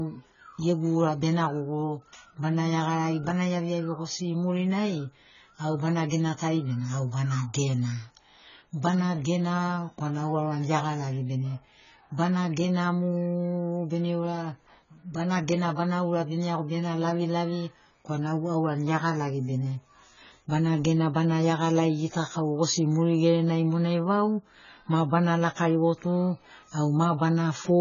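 From start to finish the speech sounds dull and smeared, with nothing above 7 kHz and a fizzy, warbling texture on sibilants and held vowels. This is likely heavy AAC compression, which fits AAC-LC at a very low bitrate around 16 kbps: the encoder drops the top band and coarsely quantises what remains, leaving spectral holes. A plain low-pass filter would dull the sound just as much but would leave no warble or fizz.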